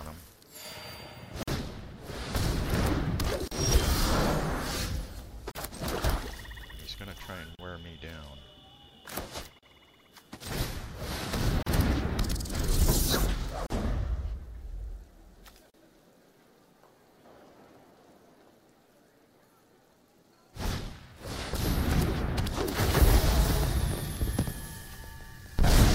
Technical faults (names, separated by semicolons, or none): gap at a join of encoded pieces